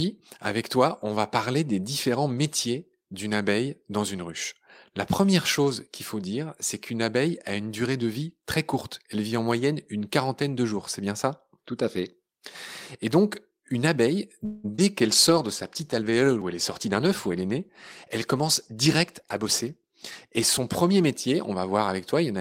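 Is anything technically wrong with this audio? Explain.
Yes. At 14.45 to 14.66 s there is a call audio freeze: the last sound carries on as a fading buzz for about 0.18 s before the audio resumes where it stopped, most likely because delayed packets left the jitter buffer empty. A spectrogram shows smeared, decaying harmonics and nothing lost afterward.

At 14.76 s a short concealed packet loss fills about 20 ms that never arrived with an extrapolated continuation blended back in, heard as a brief smear or wobble. The spectrogram shows a tiny blurred patch, and the waveform has a short, overly regular stretch.

From 15.06 to 21.51 s a call bitrate drop takes the encoder from 32 to 15 kbps, lowest for about 5.3 s, after the bandwidth estimate fell. The sound turns rougher and duller, and a spectrogram shows the high band thinned or cut off.

Two jitter buffer speed-ups follow within that stretch. 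From 16.53 to 17.59 s the audio plays about 7% fast, and from 18.09 to 19.46 s about 4% fast. The receiver drops small pitch-period pieces to shed a surplus of buffered audio, roughly a tenth of a second the first time and somewhat less the second. The pitch stays the same, and the first stretch sounds hurried. On the waveform, syllables appear slightly compressed in time with no visible gaps.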